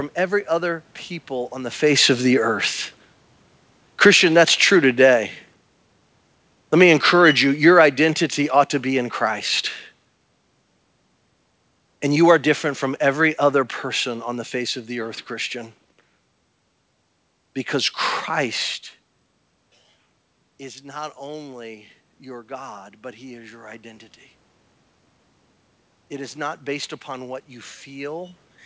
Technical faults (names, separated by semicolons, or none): automatic gain falling; automatic gain rising